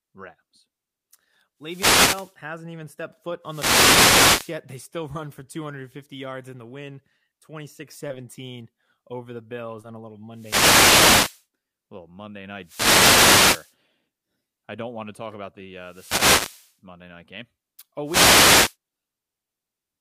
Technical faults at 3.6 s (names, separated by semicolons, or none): wireless microphone noise hit